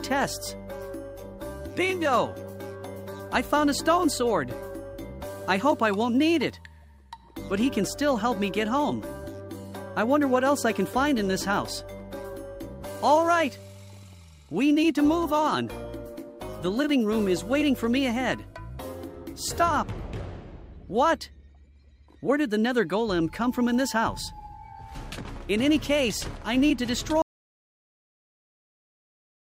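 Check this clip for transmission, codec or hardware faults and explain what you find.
An audio dropout to silence begins at 27.22 s and runs to the end of the clip. The input was likely lost, and recording carried on writing silence. The sound cuts off abruptly into total silence with no room tone left.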